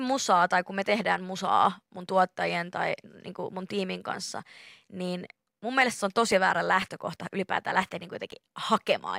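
Periodic USB or driver dropouts run from 4.32 s to 8.82 s in this speech clip, starting just after "tai niinku mun tiimin". Every 0.5 s a short gap of a couple of milliseconds is replaced with silence, about ten in all, heard as evenly spaced ticks while the speech sounds. It points to a background task blocking the USB bus or audio driver.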